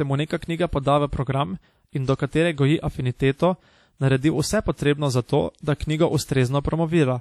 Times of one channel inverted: none

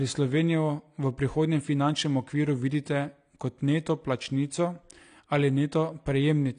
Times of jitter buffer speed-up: none

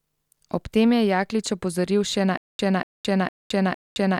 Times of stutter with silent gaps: 2.37-4.19

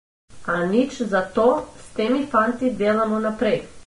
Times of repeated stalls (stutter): none

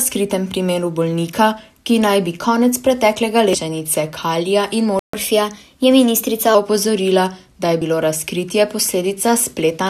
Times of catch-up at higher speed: 5.13-6.55

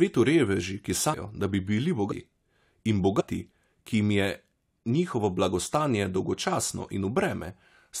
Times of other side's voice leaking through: none

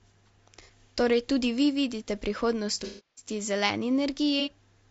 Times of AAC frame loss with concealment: 0.61-0.70, 2.84-3.29, 4.40-4.50

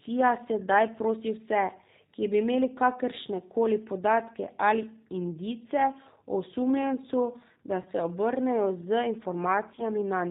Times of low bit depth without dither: none

